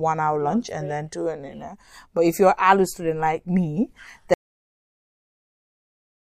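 At 4.34 s, just after "student like me", the speech cuts off abruptly. This is an audio dropout to silence. From that point to the end of the clip, about 2.0 s, there is nothing at all. No room tone or hiss remains. The input was likely lost, through a disconnected device, a broken link or an accidental mute, while recording carried on. Anything said in that final stretch is missing.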